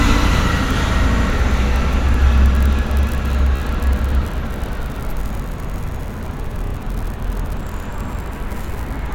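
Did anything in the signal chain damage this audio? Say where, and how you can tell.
Yes, repeated frames, from the codec or storage stage. The sound stutters at 1.12–1.25 s, where a 69.7 ms chunk plays twice more, then at 3.56–3.60 s (14.5 ms, three extra plays) and 6.65–6.72 s (21.8 ms, twice more). Each stutter lengthens the audio by the repeated time.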